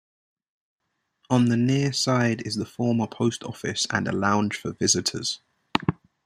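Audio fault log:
0.0–0.8 s, one channel inverted: one stereo channel has likely had its polarity reversed, so when both channels sum to mono, the speech they share cancels itself out. The level falls by about 30 dB, leaving only a faint remnant of the speech for that opening stretch.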